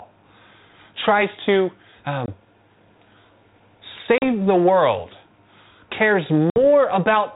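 Packet loss on an ADPCM call at 2.26 s (after "tries to"), 4.18 s (before "the world") and 6.5 s cuts 20, 40 and 60 ms silent holes. Each leaves the decoder's predictor out of step, so the sound returns slightly distorted.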